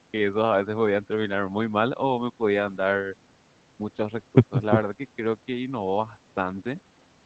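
Nothing goes wrong anywhere in this speech recording, which simply has the ordinary sound of a call link, with the top end stopping at 8 kHz as the call path would have it.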